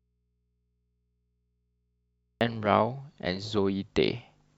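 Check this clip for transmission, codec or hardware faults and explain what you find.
One transmission fault is present: an audio dropout to a faint residue, already under way when the clip begins and lasting until 2.41 s. The wanted signal was likely lost upstream while the path after the break stayed live, so its open input passed only mains hum, roughly 50 dB below the speech level. For the first 2.41 s nothing of the speech is heard, just that low hum, and then the speech cuts in abruptly rather than fading up.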